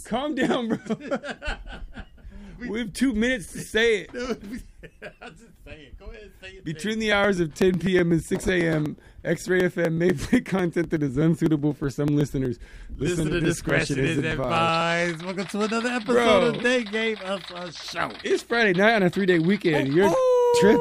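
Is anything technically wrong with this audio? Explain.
Yes. From 7.12 to 14.81 s there are periodic USB or driver dropouts: every 0.124 s something stalls the audio path and around a millisecond of signal is skipped outright, about seventy times, leaving evenly spaced ticks that sound wherever audio is present.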